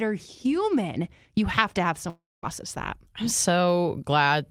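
A speech clip with a long network dropout from 2.09 to 2.45 s, between "have to have" and "that I'm". The last sound is stretched into a fading buzzy fill, then about 220 ms of near-silence, and roughly 340 ms of audio never returns, likely from packets lost in transit. On a spectrogram the harmonics smear into a decaying horizontal band before going blank; the waveform shows a shrinking tail, then a flat line until speech resumes.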